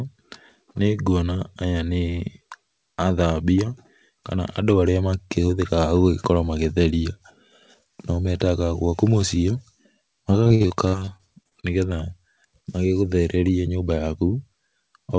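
Repeated packet loss (robotic sound) runs from 10.44 to 11.65 s. Over this stretch the call stream drops short runs of audio again and again, with the longest hole lasting about 54 ms. The receiver patches each hole by stretching out the sound just before it, so roughly a quarter of the span is synthetic filler. The speech turns choppy, with bits missing. Across the clip, nothing reaches above 8 kHz, which fits a wideband call codec such as G.722.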